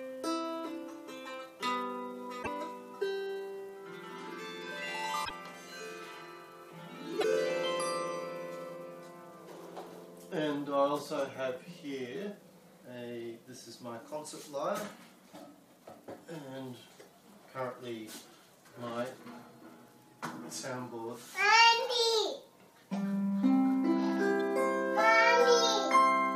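The audio carries four bursts of damaged data in a compressed stream: 2.39 to 2.47 s, 5.21 to 5.31 s, 7.20 to 7.24 s, and a single blip at 24.41 s. At each point the decoder hits corrupted frames, misreads them and has to hunt for the next valid frame header, producing brief chirps, squawks, clicks or short holes. On a spectrogram these appear as short vertical smears of broadband or garbled energy. The waveform shows abrupt, discontinuous segments at the same times.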